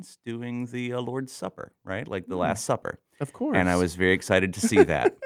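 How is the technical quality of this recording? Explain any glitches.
The recording has two stretches of automatic gain rising. From 0.23 to 2.69 s the level climbs by about 5 dB, and from 3.37 to 5.18 s by about 4 dB. The gain control judged the input too quiet and slowly turned itself up. The background noise swells along with the speech, which separates this from a speaker simply moving closer or talking louder.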